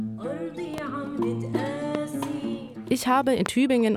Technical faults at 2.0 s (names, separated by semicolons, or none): loud pop